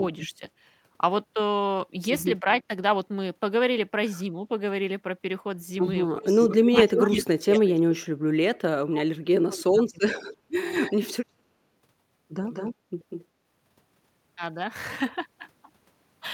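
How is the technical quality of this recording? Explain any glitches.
The recording has echo-canceller problems throughout: the talker is repeatedly turned down during double talk, delayed echo leaks back in three places, and the background briefly drops once.

Speech suppressed in double talk occurs at 0.31 to 0.42 s, at 2.41 to 2.7 s, and over a long stretch from 6.07 to 10.72 s. The first dip is around 15 dB and the second only slight, around 5 dB. In the long stretch the speech is cut hard, by as much as 35 dB or so, in pieces adding up to roughly three seconds. The likely cause is an echo canceller that could not tell this talker from loudspeaker echo while both sides spoke, so it attenuated everything.

Echo leak appears at 6.42 to 7.8 s as a copy of the speech trailing by 330 ms, about as loud as the speech itself. Two weaker leaks follow at 10.74 to 11.17 s and at 12.5 to 13.25 s, each delayed by 194 ms and sitting about 10 dB below the speech. 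Both are likely residual loudspeaker pickup that the far end's canceller failed to remove and sent back down the line.

Background gated by the echo canceller occurs at 12.77 to 12.88 s, during the third echo burst. The room tone drops by about 11 dB for roughly a tenth of a second, then returns. Here the canceller clamped the microphone hard while the loudspeaker was active, so the ambient sound briefly dips before recovering.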